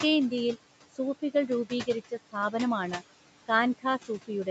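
Noise suppressor artifacts run through the whole clip. The suppressor pulls the room noise down by about 17 dB between phrases, then lets it back up under the speech, so the background pumps with each utterance against a band-limited, 8 kHz call pickup.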